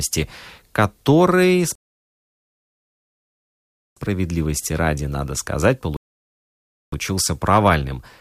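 At 1.75 s the speech just drops to silence until 3.97 s, then picks up exactly where it left off. That's a rebuffering stall: the player ran dry and waited for data. It happens again at 5.97 s, right after "ради надо сказать", holding until 6.93 s. Nothing's lost, just about 3.2 s of dead air added.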